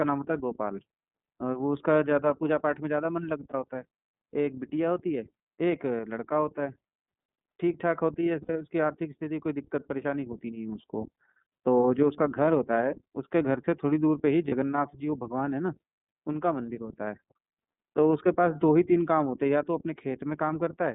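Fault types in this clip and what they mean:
iLBC codec: The whole clip passes through the iLBC narrowband VoIP codec, which codes each frame's excitation independently of the frame before. Its band runs from about 150 Hz to 3.7 kHz, so nothing above that survives and the speech sounds thin and telephone-like. The coding damage is plainly audible as a rough, slightly synthetic texture on the speech. The 30 ms frame length fits the 13.33 kbps mode.
lost iLBC frames: At 3.51 s, 8.43 s and 14.48 s, short dropouts are bridged by the decoder repeating the last pitch cycle mixed with noise. Each sounds like a briefly held, faintly buzzy vowel. The gaps at 3.51 s and 14.48 s last 30 ms, which points to a single lost frame. The one at 8.43 s lasts 60 ms, which suggests two frames in a row. Because each frame stands alone, the speech recovers almost immediately after every gap.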